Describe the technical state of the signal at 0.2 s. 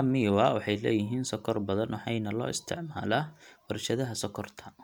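At 0.2 s the speech signal is intact, with no fault audible at that moment.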